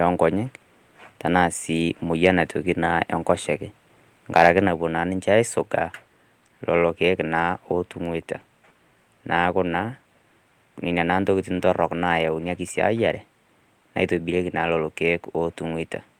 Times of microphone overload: 2.25-2.27, 4.36-4.59

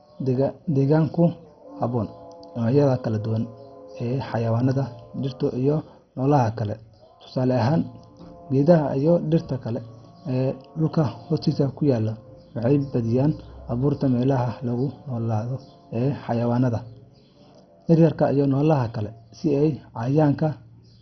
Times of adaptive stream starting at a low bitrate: none

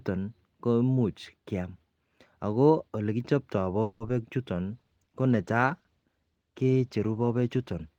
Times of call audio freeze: 3.82-4.01

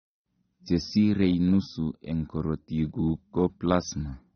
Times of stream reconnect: none

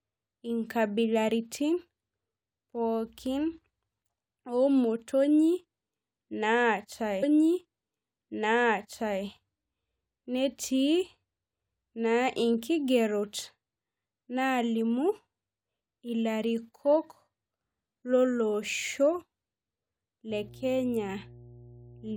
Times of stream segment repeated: 7.22-9.22

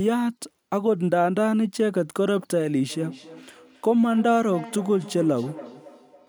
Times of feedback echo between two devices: 2.90-6.29

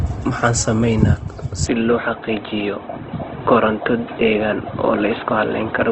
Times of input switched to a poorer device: 1.66-5.92

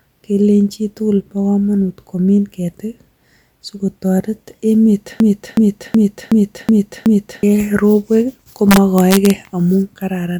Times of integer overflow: 8.71-9.30

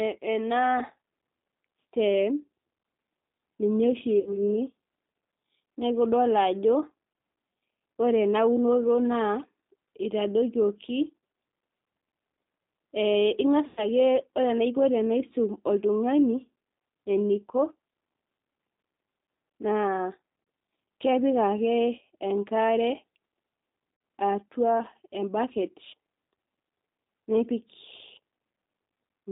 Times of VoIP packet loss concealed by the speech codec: 4.20-4.40, 13.67-13.86, 20.43-20.47, 23.95-24.01

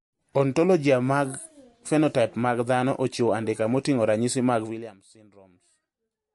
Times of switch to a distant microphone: none

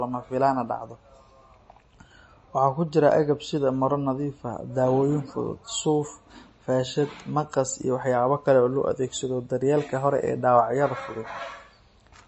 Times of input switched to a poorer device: none

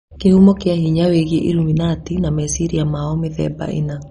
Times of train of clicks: none

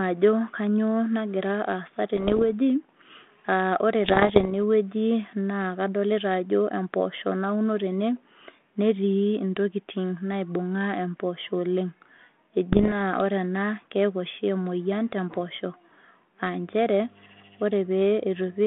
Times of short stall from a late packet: none

